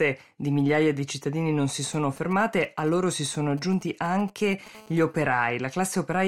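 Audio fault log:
1.69–4.68 s GSM signalling bursts: Right after "migliaia di cittadini non", a galloping run of ticks and brief buzzes appears, roughly 20 dB below the speech. A nearby 2G handset is sending short groups of radio bursts while signalling rather than transmitting continuously. The audio circuitry rectifies each group, so the bursts come through as clicks, and within each group the 217 Hz burst rate is heard as a short, coarse buzz.
4.75–5.58 s GSM phone buzz: The pattern changes to a steady, raspy 217 Hz buzz with a dense harmonic series, about 30 dB below the speech and unrelated to it. The handset is now in call mode and transmits a burst 217 times a second without gaps. Rectification of that pulse train in the audio path produces a continuous tone whose sharp-edged pulses account for the harsh, harmonic-rich timbre.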